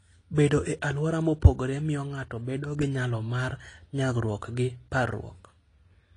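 From start to finish the speech sounds dull and smeared, with nothing at all above about 10.1 kHz, and sibilants and held sounds carry a fizzy, warbly texture. That's most likely AAC compression, AAC-LC squeezed hard enough that it fits a bitrate around 32 kbps. At that rate the encoder drops its cut-off and starves bands of bits, leaving gaps or noisy fill in the spectrum, and the damage is plainly audible here.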